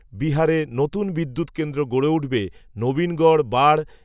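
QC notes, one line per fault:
No fault found, so there are no QC notes to log.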